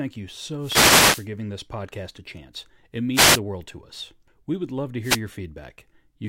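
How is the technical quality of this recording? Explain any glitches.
The recording is marred by three wireless microphone noise hits, at 0.59 to 1.28 s, 3.13 to 3.40 s and 5.01 to 5.20 s. Each is a brief swish of static over the speech, the first lasting about 0.7 s and the others under 0.3 s. They arise when reflected copies of the analogue FM radio signal cancel at the receiver, so the carrier fades and receiver noise rises up through the audio.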